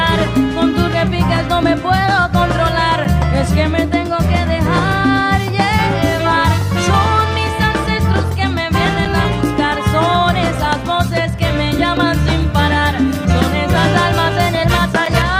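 At 0.71 to 0.74 s there is AAC frame loss with concealment. About 21 ms is rebuilt from the previous spectrum, which fits one missing frame, and it sounds briefly smeared and noisy.

A gap between chunks falls at 3.04, 9.05 and 15.06 s. Each is a hole of about 7 ms, recurring every 6 s where chunks join.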